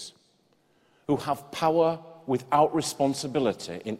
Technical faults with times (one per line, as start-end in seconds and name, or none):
none